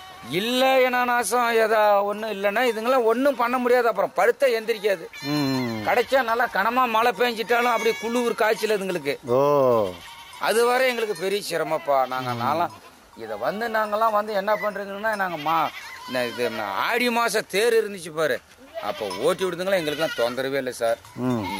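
The audio carries crude rate conversion throughout. A gritty, inharmonic fizz rides on loud and bright passages, roughly 25 dB below the signal. The sound points to nearest-sample repetition, which fits a 32 kHz to 48 kHz change, with no filtering to remove the resulting unrelated tones.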